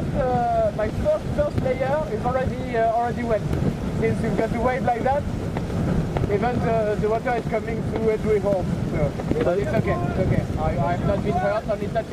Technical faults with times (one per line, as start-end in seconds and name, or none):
none